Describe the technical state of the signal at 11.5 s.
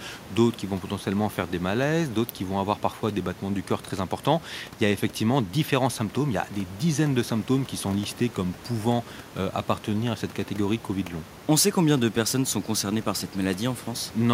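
At 11.5 s the signal is intact, with only the room's own background noise sitting about 21 dB below the speech.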